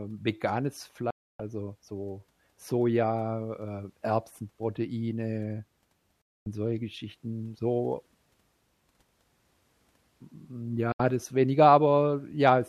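A speech recording with three digital broadcast dropouts. The sound mutes at 1.10 s for about 0.29 s, at 6.22 s for about 0.24 s, and at 10.92 s for about 0.07 s, just before "das weniger". Each cut fades out in about 3 ms, so it sounds abrupt. The receiver lost the signal or rejected corrupted frames, then muted until clean frames returned. The lengths fit runs of 24 ms frames. The speech sent during each gap is gone.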